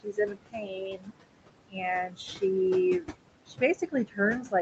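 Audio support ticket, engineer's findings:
Noise suppressor artifacts throughout. Background drops by about 21 dB between phrases and swells back under speech. Cause: frame-by-frame band gating of room noise sitting about 10 dB below speech.

Speech cut by the noise suppressor. Onset 0.03–1.16 s, about 22 dB down, roughly a second swallowed. Short dips at 1.68–1.83 s (about 21 dB) and 2.07–2.2 s (about 14 dB). Later 3.46–4.19 s, about 16 dB. Suppressor misclassifying quiet speech as noise. Band limit at 8 kHz from the Opus call path.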